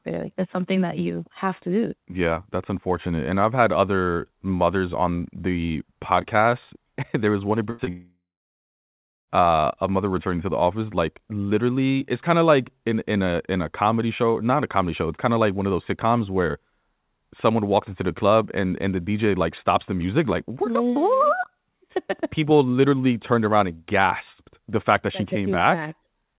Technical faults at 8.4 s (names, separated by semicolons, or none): long network dropout